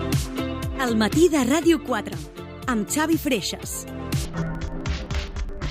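The clip is a short stretch of audio whose final section, from 4.25 s to the end at 5.71 s, has interleaved audio read as planar. Each block of about 43 ms, which fits a 2048-sample block, has its alternating left and right samples split into a first and second half that play together at half speed. The sound drops an octave, comes out doubled, and chops at about 23.4 Hz, the block rate, while the overall pace stays unchanged.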